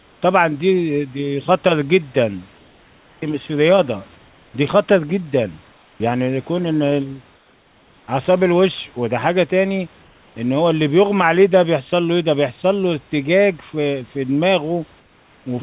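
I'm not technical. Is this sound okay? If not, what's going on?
No. The issue is comfort noise in place of the background, in the pauses at 0 to 0.22, 2.58 to 3.22, 4.18 to 4.54, 5.72 to 6.0, 7.36 to 8.08, 10.02 to 10.36, and 15.0 to 15.46 seconds. In each gap, the real room sound gives way to a smooth, even hiss that is a little quieter. This is likely because the call stopped sending audio while nobody spoke and the receiving end filled the silence with artificial noise.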